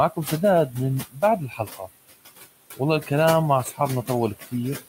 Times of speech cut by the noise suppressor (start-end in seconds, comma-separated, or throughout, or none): 1.10-1.88, 3.64-3.80